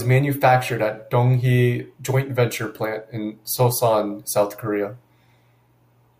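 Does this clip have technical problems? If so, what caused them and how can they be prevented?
No, nothing in this speech recording points to a technical fault, so there is no cause to trace and nothing to prevent.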